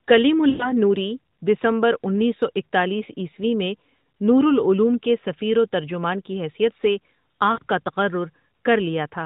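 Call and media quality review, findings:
Lost AMR speech frames, 0.50–0.73 s before "نوریؔ دسمبر انیس سو" and 7.52–7.59 s before "کا تقرر": the decoder repeats the last good frame and fades its gain, fitting runs of roughly five and three 20 ms frames. On a spectrogram, smeared harmonics decay; in the waveform, a tapering envelope. The AMR narrowband mobile codec band edge at 4 kHz stays visible throughout.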